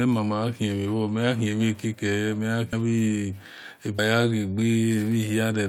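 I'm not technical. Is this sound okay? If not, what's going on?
No. This speech clip has compressed frames skipped at 2.72 s and 3.98 s. Audio files store sound in small chunks called frames, each about 21 ms long. At these two moments a few frames never get played, probably four or five each time. So the speech jumps ahead by about a tenth of a second. You hear a brief glitch at each join, and a tiny piece of speech goes missing.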